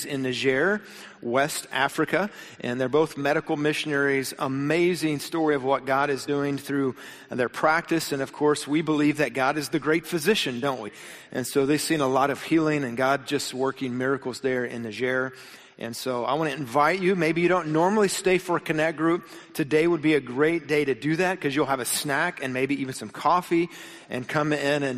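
Whole frames of the compressed stream never reached the output, either missing from the file or rejected by the decoder as damaged, so the audio has compressed frames skipped at two points. At 6.27 s the playback jumps ahead by about 20 ms, which fits one frame of about 23.2 ms. At 10.87 s it jumps by about 50 ms, roughly two frames.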